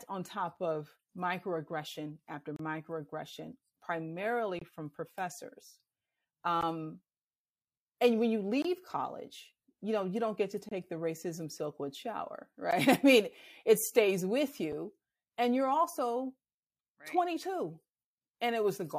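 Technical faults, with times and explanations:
2.56, 4.59, 6.61, 8.62, 10.69, 12.71 s: gap between stream segments. Hard-edged silences of about 14 to 31 ms recur every 2 s at segment boundaries, where timestamps leave holes the player fills with silence.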